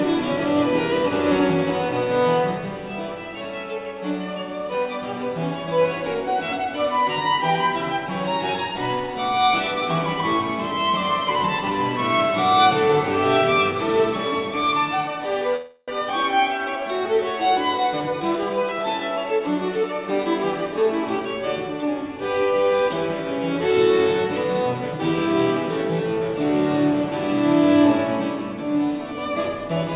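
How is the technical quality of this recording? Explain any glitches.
The recording comes through a narrowband call path, with nothing above 4 kHz and the grainy coding noise of a G.711-style telephone codec, and it has a cluster of four timing glitches between 15.56 and 19.84 s.

From 15.56 to 15.90 s there is a call audio freeze. For about 0.32 s the last sound is carried on as a fading buzz or hiss rather than dropping to silence. The likely cause is delayed packets draining the jitter buffer, with the receiver extending what it last had until they arrived. Nothing is lost: the audio resumes exactly where it stopped, just later. That is what separates it from a dropout, which would remove content.

At 16.10 s there is a skip ahead, the opposite case. Roughly 150 ms of audio is simply gone, and the two sides are butted together with almost no gap, so the sound lurches forward abruptly. 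This happens when a stretch is dropped, on the way or by the buffer when it overflows, while later audio is already queued. There is no filler here, only a jump.

From 16.40 to 16.89 s comes a jitter buffer slow-down. The sound plays at about 88% speed while keeping its pitch, so it seems drawn out. The receiver repeated single pitch periods many times over to build a reserve, adding about 67 ms. Unlike the freeze, the content keeps moving, only stretched, rather than stalling on one sustained tone.

From 17.78 to 19.84 s there is a jitter buffer speed-up. The audio runs at about 111% with unchanged pitch and sounds hurried. The buffer trimmed short pitch-period pieces repeatedly to reduce its excess delay, removing roughly 200 ms spread across the two seconds. This differs from the skip ahead because the loss is distributed in tiny cuts rather than taken as one audible jump.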